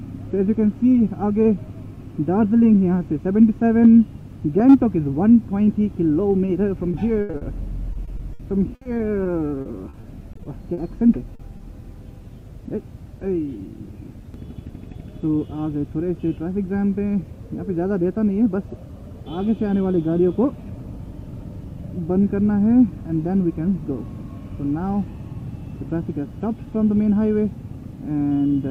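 At 6.45 to 6.49 s, a short concealed packet loss: 20 ms of audio arrived too late, so the receiver extended the preceding sound and blended back. It is a single brief smear, not a sustained texture.

From 6.91 to 7.43 s, repeated packet loss (robotic sound) sets in. Four gaps total 160 ms, the longest 80 ms, patched over 31% of the stretch. The back-to-back concealment makes the audio choppy and mechanical rather than a one-off wobble.

From 7.93 to 10.79 s, the same repeated packet loss returns with 15 gaps totalling 440 ms, each no longer than 60 ms. Because the gaps are sparser here, about 15% of the stretch is concealed.

At 11.35 to 11.41 s (40 ms) and 11.57 to 11.61 s (20 ms), two more isolated short concealed losses each leave a momentary smear.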